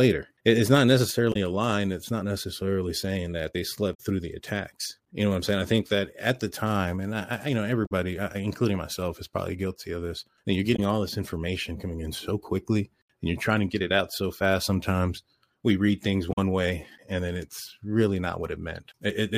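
Damaged data in the compressed stream makes the decoder misread frames and lose sync, so the speech breaks into brief glitches at 1.32–1.36 s, 3.93–4.00 s (after "necessarily saying that they"), 7.85–7.92 s (after "I I you know"), 10.75–10.79 s (before "all this information coming") and 16.32–16.38 s.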